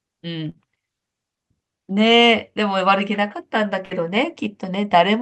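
At 0.49 s and 3.85 s, a burst of packet loss drops about 60 ms of audio. The receiver stretches the last sound across each hole, heard as a brief fading buzz or hiss, and the speech then jumps ahead with that stretch missing.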